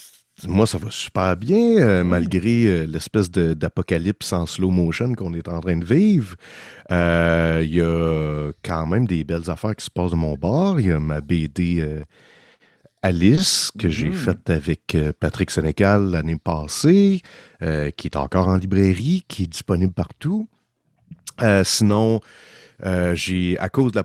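Through the speech you get a run of lost packets rebuilt from error correction. Each time, the decoder played the next packet's low-bitrate backup copy, so there's no gap, just a brief rough, noisier patch. These land at 1.83–1.85 s right after "ça va super bien", 7.01–7.03 s, and 9.35 s between "a quand même des" and "affaires qui se passent".

At 13.35–13.39 s, just before "que j'ai", there's a short concealed packet loss. About 20 ms never arrived, so the receiver extended the preceding sound to fill it, giving a quick smear or wobble. It runs straight into another error-correction rebuild at 13.37–13.39 s.

More rebuilt packets follow at 15.67–15.69 s and 19.43–19.45 s. The longest is 21.85–21.95 s, where about 60 ms of rougher audio fits three packets.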